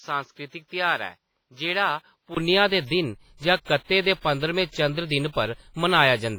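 From 0.00 to 2.37 s the speech sounds dull and narrow. Nothing is heard above about 6.7 kHz. The level sits about 5 dB lower. A new background noise lies far below it, around 55 dB down. At 2.37 s a 20 ms silence falls, then the fuller sound returns on "दे दिन". This is likely an input switched to a poorer device.

Throughout the clip there is heavy codec damage. The speech rings and smears. A hiss rises and falls with the signal. Quiet detail drops out. This is likely WMA compression at a low bitrate, around 24 kbps. Its long transform blocks spread quantisation noise in time.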